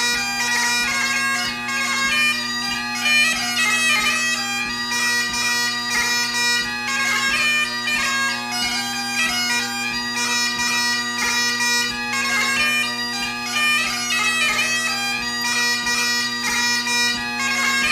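A brief chirp-like blip at 7.18 s is a corrupt frame decoded: damaged bits in one compressed frame misplaced energy, peaking around -20 dBFS.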